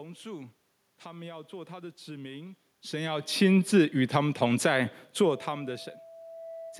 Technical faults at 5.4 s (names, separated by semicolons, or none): loudspeaker feedback squeal